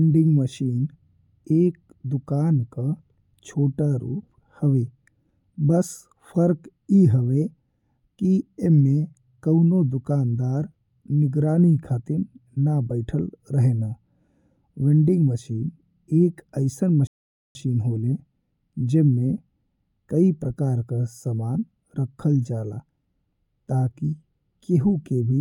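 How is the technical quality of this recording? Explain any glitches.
The recording has one glitch: a rebuffering stall in the speech at 17.07 s. The audio cuts abruptly to silence and stays silent until 17.55 s, inserting a gap of about 0.48 s. Playback then resumes exactly where it stopped, with nothing skipped or repeated. The player ran out of downloaded data, halted, and waited for more to arrive before continuing. Every part of the speech is preserved, but the timing is stretched by that pause.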